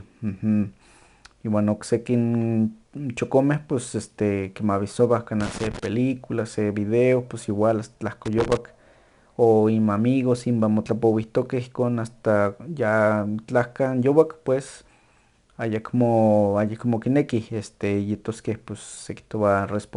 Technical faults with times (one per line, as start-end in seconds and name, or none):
0.00-19.96 4-bit ADPCM compression
5.40-5.86 loose connector crackle
8.26-8.57 loose connector crackle